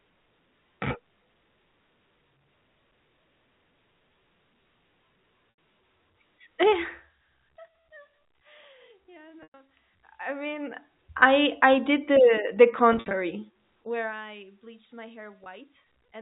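Telephone-band speech with brief held, buzzy glitches at 5.5–5.58 s, 9.43–9.54 s, 12.93–13.13 s (scattered dropouts, longest 60 ms) and 15.44–15.46 s: packet loss with pitch repetition, where the receiver loops the last pitch period to cover the missing audio, then fades it.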